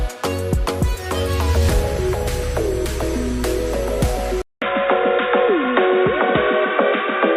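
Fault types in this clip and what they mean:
Input switched to a poorer device, from 4.42 s to the end: after a 200 ms silence at 4.42 s the sound turns dull and boxy, with nothing above 3.8 kHz, a small shift in level and a faint new background noise sitting well under the signal. This is likely the recording input changing mid-take to a narrower-band microphone or a headset's call profile, which brings its own tone, level and noise floor.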